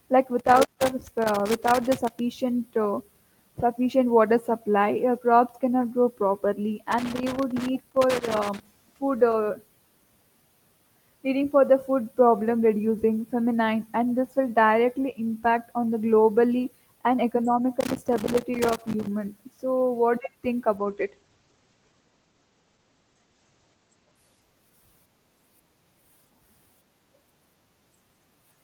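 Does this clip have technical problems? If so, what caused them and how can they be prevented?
Yes. Loose connector crackle appears at 0.39–2.19 s (before "uh sufficient water"), 6.92–8.67 s (between "crops cannot grow properly" and "food uh"), and 17.81–19.07 s. A worn contact breaks intermittently, producing jagged waveform spikes and broadband vertical streaks on a spectrogram. Cleaning or replacing the connector and securing the cable prevents this.

A call bitrate drop runs from 20.78 to 25.49 s. The bitrate falls from 32 to 12 kbps for about 3.1 s, and bandwidth narrows from 20 kHz to 8 kHz, so the audio turns muffled and rough. A spectrogram shows a flat ceiling at 8 kHz. A stable wired connection helps prevent this.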